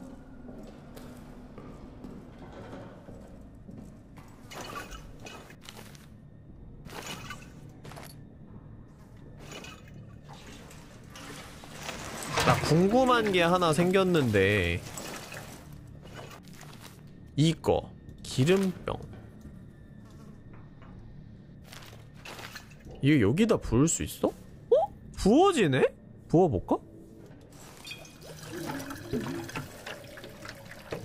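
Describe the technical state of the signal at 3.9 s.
At 3.9 s the signal is intact, with no audible fault at that point.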